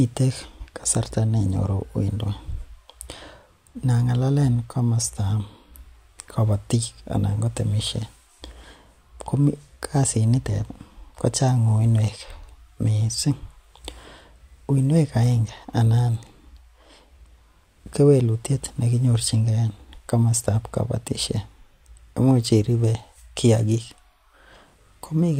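No technical faults can be heard anywhere in the recording.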